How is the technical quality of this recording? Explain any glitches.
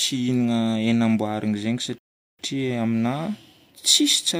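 A rebuffering stall interrupts the speech from 1.98 s to 2.39 s. The player exhausted its downloaded audio and halted playback until more data arrived, so the speech drops abruptly into silence for about 0.41 s. When data caught up, playback picked up at the exact point where it stopped. No speech is skipped or repeated, but the pause adds roughly 0.4 s to the clip's running time and breaks its natural flow.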